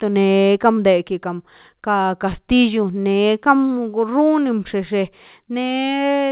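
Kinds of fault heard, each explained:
Short concealed packet loss: about 20 ms of the speech reached the decoder too late, so the receiver extended the preceding sound to fill the gap near 0.74 s.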